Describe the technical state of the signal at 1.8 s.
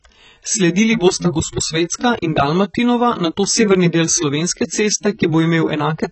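AAC compression at 1.8 s, spanning the whole clip: nothing above 8.1 kHz and a dull, warbly smear, likely from coarsely quantised AAC-LC near 16 kbps.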